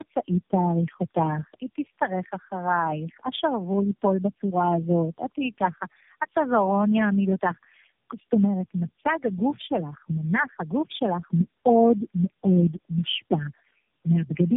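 Throughout the clip, the speech has passed through tandem speech coding: it was decoded and re-encoded at each link border, probably four low-rate speech coders in a row, such as AMR-NB and G.729A with G.711 links between them. Each coder compressed the previous coder's already damaged output, so the errors piled up. The result is rough, muffled and warbly speech, with nothing above 3.7 kHz.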